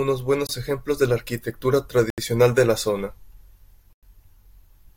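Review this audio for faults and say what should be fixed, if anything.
The speech cuts to silence three times: at 0.47 s for 23 ms, at 2.10 s for 78 ms, and at 3.93 s for 99 ms. This is a Bluetooth stall, most likely from radio interference delaying packets until the headphone buffer ran empty and playback halted. Codec loss concealment fills a gap with smeared or repeated sound; these gaps are clean, hard silences. Reducing interference and keeping the phone close to the headphones should prevent it.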